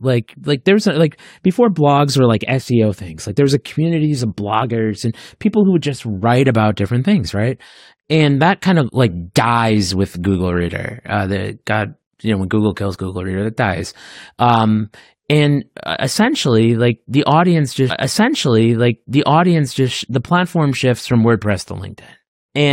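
A stream segment repeated in this speech clip from 17.89 to 19.89 s: the player queued the same segment twice, so about 2.0 s replays after a small blip at the jump.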